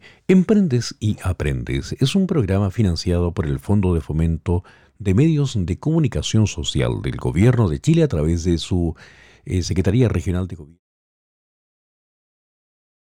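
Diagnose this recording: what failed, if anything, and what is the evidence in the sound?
Nothing failed; a smooth fade-out ends at 10.8 s.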